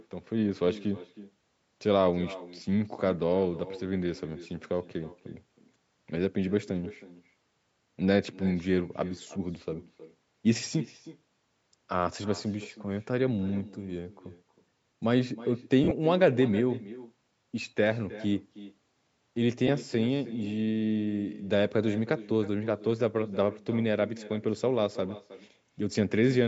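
Speech recorded through a call's microphone path, with nothing above 8 kHz, carries an echo with no canceller from start to finish. A thinner copy of every phrase returns around a third of a second later, about 17 dB down. That discrete, delayed repeat separates it from ordinary room reverberation, which blurs straight into the sound instead. There are also lost LE Audio frames at 15.84–15.92 s, where 60 ms go missing scattered over 75 ms, the longest gap being roughly 40 ms, and at 19.67–19.69 s, where 15 ms go missing. That fits 7.5 ms LC3 frames. Each gap is covered by the decoder's recycled spectrum, so tonal parts turn into a brief noisy smear rather than cutting to a hard click or silent dropout.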